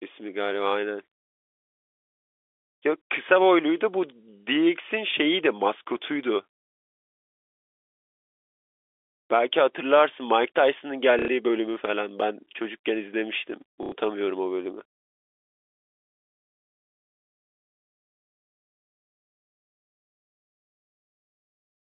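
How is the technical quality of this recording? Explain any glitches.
Two brief dropouts mar the telephone-band recording, which carries the narrow 300 Hz to 3.5 kHz band typical of G.711 telephone coding. Both are packet loss with last packet repeated, at 11.19 to 11.28 s and again at 13.83 to 13.92 s, each lasting 90 ms. Audio packets failed to arrive, so the receiver looped the last one it had until fresh data resumed, which fits roughly three lost packets each time. The looped segment seldom aligns with the speech's pitch, and the quick repetition produces a short, buzzy, robotic stutter.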